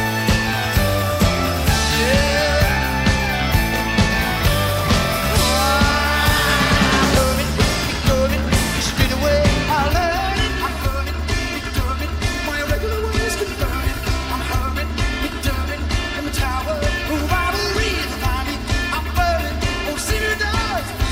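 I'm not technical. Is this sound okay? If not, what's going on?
No. From about 9.9 s to the end, the sound turns hollow and phasey. This is channel delay (comb filtering): one side arrives roughly 3 ms late, and mixing both sides together cancels evenly spaced pitches, starting around 150 Hz.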